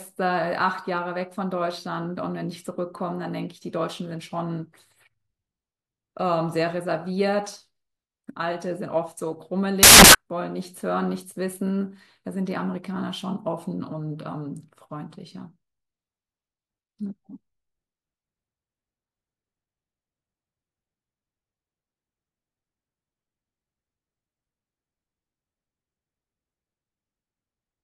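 A speech recording with one fault. From 9.83 to 10.15 s, the samples are built from the wrong bytes. The reader misaligns or swaps each sample's bytes, so the fast-changing low bits dominate. This gives about a third of a second of loud, harsh broadband noise.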